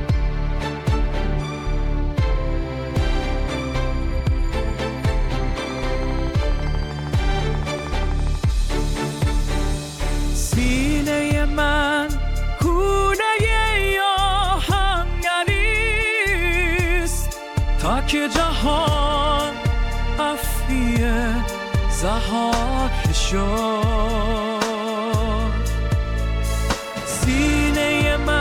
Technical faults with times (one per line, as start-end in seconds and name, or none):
5.70-8.36 train of clicks